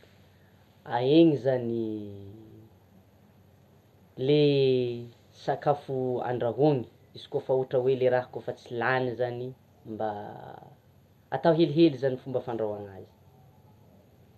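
No faults are audible in the speech; the top end stops at about 12 kHz, which fits an Opus call path running at its normal settings.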